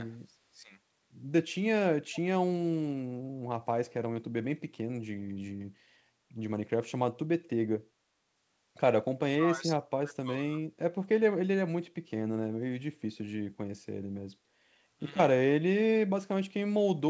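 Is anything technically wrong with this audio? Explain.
Yes. Speech suppressed in double talk occurs from 0.25 to 0.7 s and again from 9.29 to 10.58 s. The echo canceller likely mistook simultaneous far-end talk for echo and suppressed both, so the speech dips by about 20 dB, then about 25 dB, breaking up for roughly half a second and about a second.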